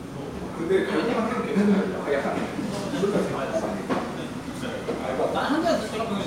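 At 2.49 to 2.51 s and again at 5.01 to 5.04 s, overlapping chunks replay about 25 ms at each 2.5 s join, a stutter rather than a gap.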